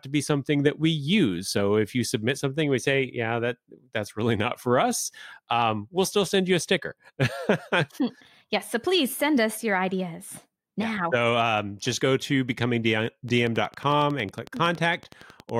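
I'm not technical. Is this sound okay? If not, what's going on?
No. From 13.29 s to 15.50 s, near the end of the speech, a train of clicks sits on top of the recording: a steady ticking of about 11 clicks per second, some thirty in all, evenly spaced and alike in shape. They are loud enough to stand out above the speech and stay audible in the gaps between sounds. The likely cause is electrical interference from nearby equipment or a faulty connection or power supply, adding a pulse at a regular rate.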